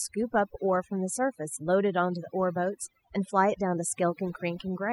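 Overdone noise removal runs through the whole speech recording: a noise reducer set far too aggressively cuts individual frequency bands whenever they sit near its noise estimate. Gaps fall to near silence with twinkling specks, and the quieter components of the voice vanish along with them.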